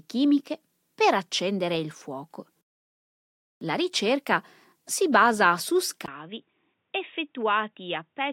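A speech recording in which the sound abruptly narrows at 6.06 s: after a gap of about 20 ms, everything from there to the end at 8.33 s has nothing above 3.7 kHz, sounds boxy and dull, sits roughly 5 dB lower, and carries a faint new noise floor around 50 dB below the signal. The likely cause is the input switched to a poorer device, such as a headset's narrowband call profile, with its own tone, gain and background noise.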